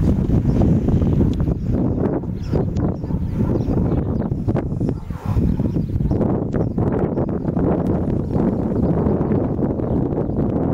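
Two brief bursts of damaged data in a compressed stream break into the audio, from 2.73 to 2.77 s and from 6.49 to 6.53 s. Each lasts only about 40 ms, as the decoder misreads or drops the corrupted frames and must hunt for the next valid frame header before playback resumes. From 7.87 to 9.55 s a doubled audio track appears: a second, full-band copy trails the original by around a fifth of a second at about 5 dB lower, then cuts off abruptly. The likely cause is a second capture path or an edit that left two copies out of step. Unlike room echo or reverb, the copy has no decay, no repeats and no room colouring.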